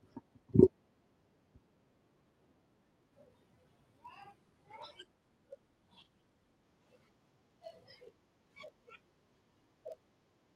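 From 2.92 s to the end, a filter restarted on every block. Each block starts from silence, causing a buzz near 46.9 Hz, which fits 1024-sample blocks. Between 4.38 and 6.69 s, a call bitrate drop from 64 to 26 kbps coarsens the coding and narrows bandwidth from 20 kHz to 12 kHz, sounding muffled and rough.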